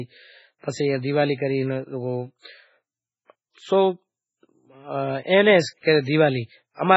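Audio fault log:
throughout: MP3 compression; speech cuts off above 7.7 kHz with heavy watery swirl as weak spectral lines drop out, likely from a bitrate near 16 kbps.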